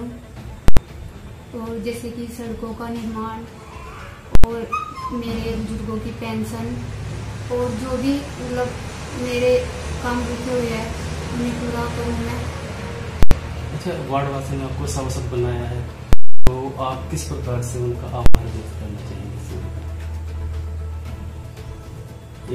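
The audio is hit five times by invalid numbers at full scale. Short bursts of about 85 ms land at 0.68, 4.35, 13.23 and 18.26 s. Each sounds like a single hard bang. A longer one runs from 16.13 to 16.47 s. It gives a loud pop at each edge with silence between. A calculation produced infinite or invalid values, and the output was pinned to full scale for a whole processing block. The short lengths fit 4096-sample blocks.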